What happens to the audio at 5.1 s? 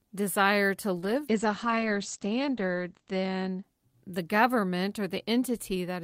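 Nothing goes wrong at 5.1 s; the speech runs through that moment intact, with no dropout, click or other fault.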